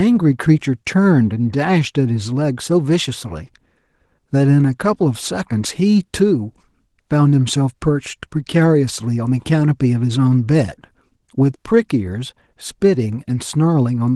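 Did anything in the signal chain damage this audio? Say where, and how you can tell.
No, nothing in the chain damaged this speech; the Opus voice compression stage keeps the full band in hybrid mode and is working as intended.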